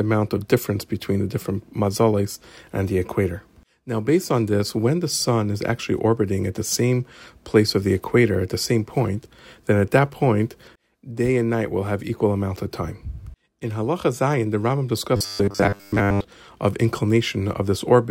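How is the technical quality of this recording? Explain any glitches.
There's one glitch, near the end. From 15.17 to 16.26 s the speech turns into robotic sound from repeated short buffers: a rigid, metallic buzz at 100 Hz that still roughly tracks the speech. That's likely audio arriving too late, so the player keeps looping a tiny slice, which fits a 10 ms buffer, for most of that stretch while the real audio gets skipped.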